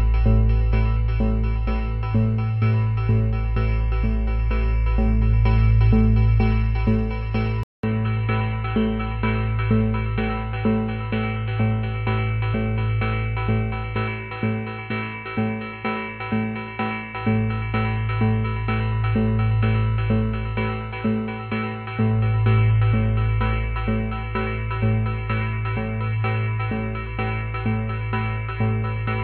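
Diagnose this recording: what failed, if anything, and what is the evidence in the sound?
At the capture stage, the input likely switched to a poorer device. A 200 ms gap at 7.63 s is followed by nothing above 4.2 kHz, a level about 5 dB lower, and faint new noise.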